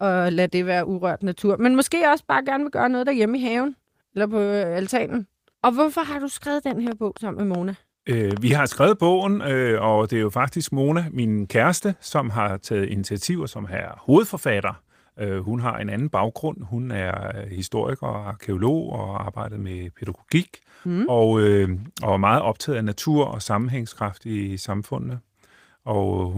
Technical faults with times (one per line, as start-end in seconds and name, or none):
6.71-8.52 train of clicks